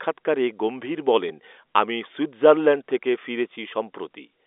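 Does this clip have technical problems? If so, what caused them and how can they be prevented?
Yes. At 1.29 s, packet loss with the last packet repeated replays about 10 ms of audio, which fits a single lost packet. The result is a brief small blip rather than a silent gap. A jitter buffer with proper packet loss concealment on the G.711 telephone line would smooth over such losses.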